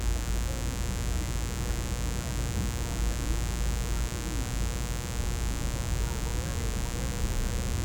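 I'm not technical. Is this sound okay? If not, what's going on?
No. Mains buzz runs through the whole clip: electrical interference from 60 Hz wiring leaks in as a steady, raspy hum, fairly loud against the sound.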